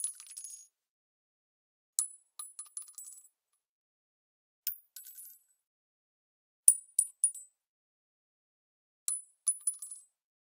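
No technical faults are audible.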